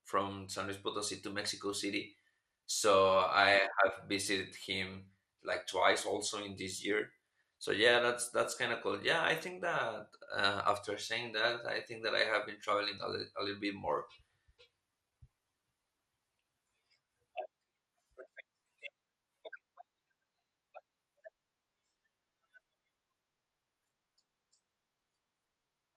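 Speech throughout shows MP2 compression damage: dull, band-limited tone with gurgling, granular distortion as upper sub-bands drop out, likely from a low bitrate around 80 kbps.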